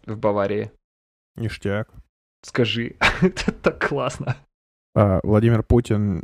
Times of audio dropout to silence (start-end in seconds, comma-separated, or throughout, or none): none